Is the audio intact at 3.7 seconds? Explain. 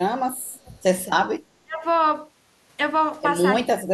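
No. Speech suppressed in double talk runs from 3.62 to 3.93 s. The speech sinks by roughly 30 dB, likely because an echo canceller ducked both overlapping talkers.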